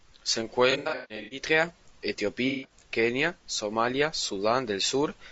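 Low-delay AAC compression runs through the whole of this speech clip. The voice is rough and grainy, with noise filling the gaps between pitch harmonics and a thin, synthetic-sounding top band. This is plainly audible and is likely the work of AAC-ELD at around 32 kbps. That codec's short frames resolve harmonics poorly and consume bits quickly, so little detail survives at this rate.

AAC frame loss with concealment occurs from 0.71 to 1.42 s and again from 2.48 to 2.71 s. In the first span, about 420 ms of audio is missing, scattered across roughly 600 ms, with the longest gap around 150 ms. The decoder patches each hole from the last good spectrum, so the sound turns smeared, noisy and phasey. The second span loses 150 ms, with the same smeared fill.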